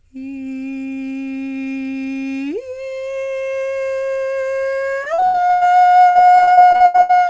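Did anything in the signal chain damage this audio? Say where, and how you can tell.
Yes, repeated packet loss (robotic sound) at the network stage, from 5.04 to 5.63 s and again from 6.09 to 7.22 s. The music turns choppy as gaps of up to 80 ms recur about every 100 ms, with roughly two fifths of each stretch patched by extending the previous sound. A single dropout or buffer underrun would leave one silence or click. This is a sustained run of concealed holes. Above it, the call path's G.722 codec leaves nothing above 8 kHz.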